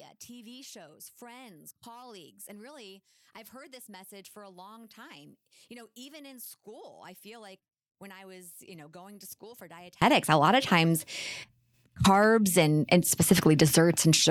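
One channel inverted, from 0.0 to 10.02 s: the speech sits about 26 dB lower than it should and sounds faint, as though most of it has been carved away. The likely cause is one stereo channel carrying reversed polarity, so when the two sides are combined, the centred speech they share cancels almost completely. Only the small difference between left and right survives, leaving a weak residue of the speech.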